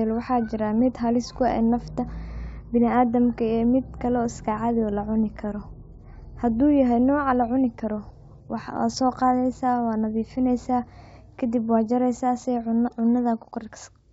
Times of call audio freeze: none

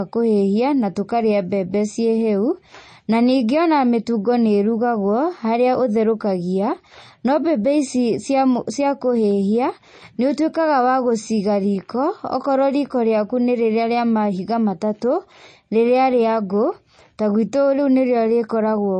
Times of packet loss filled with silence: none

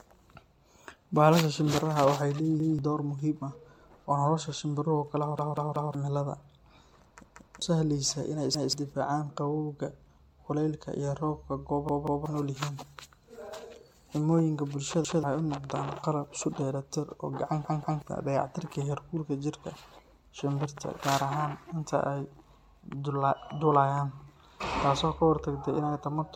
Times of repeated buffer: 2.60-2.79, 5.39-5.94, 7.24-7.62, 8.54-8.73, 11.89-12.26, 15.05-15.23, 17.65-18.02

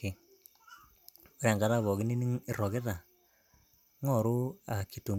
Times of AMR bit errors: none

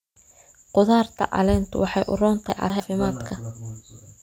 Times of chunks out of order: 2.50-2.80

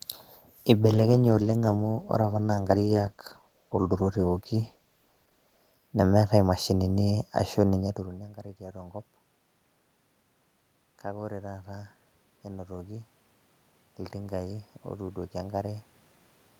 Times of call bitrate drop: 0.88-5.79

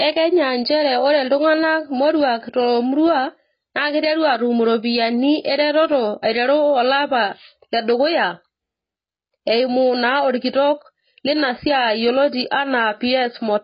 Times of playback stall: none

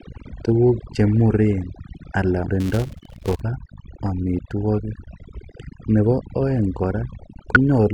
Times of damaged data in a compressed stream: 0.30, 2.49, 5.23, 7.55

